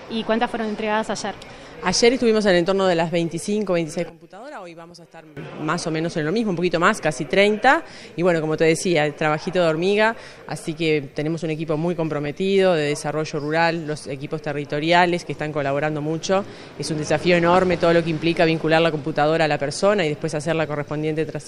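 From 4.10 to 5.37 s, one stereo channel was likely polarity-inverted, so the shared centre content cancels in mono and the sound drops about 19 dB into a faint residue. Within that span, from 4.69 to 4.91 s, DAB burbling appears: weak reception lets bit errors at a few tenths of a percent slip into the MP2 data, and corrupted sub-bands give short blips of noise. The same burbling returns at 12.22 to 12.26 s and again at 17.44 to 17.83 s.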